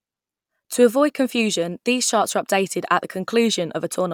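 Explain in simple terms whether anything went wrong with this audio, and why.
Nothing went wrong with this audio, as there is no technical fault to be heard anywhere in the recording.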